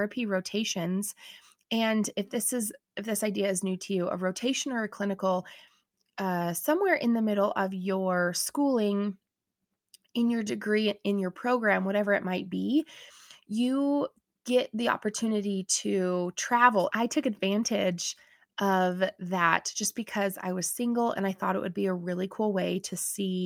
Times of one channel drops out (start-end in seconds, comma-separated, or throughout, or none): none